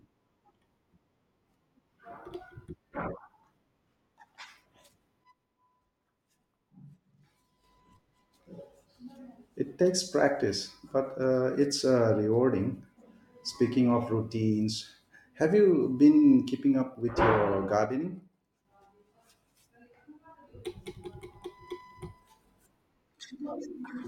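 From 5.24 to 7.64 s the speech drops abruptly by about 6 dB, then returns to full level just as suddenly. The same step down occurs again from 17.85 to 18.65 s, right after "keeping up with your". The likely cause is one channel drops out: with one stereo side missing, the mono sum keeps only half of the shared signal, and anything carried solely in the lost channel vanishes until it comes back.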